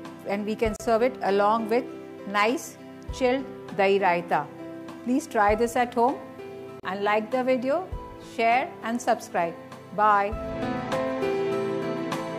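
At 0.76 s and 6.80 s, roughly 6 s apart, a gap at a join of encoded pieces drops the sound out for about 35 ms. Leftover encoder delay and padding show as blank vertical spectrogram strips with softened edges.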